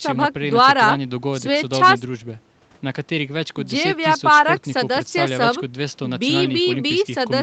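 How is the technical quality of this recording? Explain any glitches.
Nothing stood out as a glitch on listening to this speech recording, which has the limited top end typical of a call, with nothing above 8 kHz.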